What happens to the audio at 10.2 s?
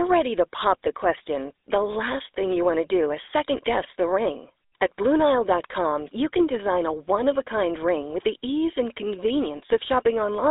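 At 10.2 s the speech carries GSM full-rate codec damage, present across the whole clip. A vocal-tract model driven by sparse, regular pulses leaves a buzzy, gravelly roughness, and nothing passes above 3.8 kHz. That grit separates it from plain telephone band-limiting, which only muffles.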